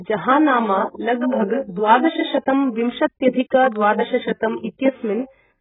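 From start to finish the speech is dull and band-limited, with nothing above 3.8 kHz, and it carries a heavy warbling, smeared texture. This is most likely AAC compression: an AAC-LC encoder short of bits, at a rate that fits something near 8 kbps, lowers its cut-off and quantises coarsely. On a spectrogram the energy stops at a flat ceiling at 3.8 kHz, with patchy holes and blurred, blocky detail below it.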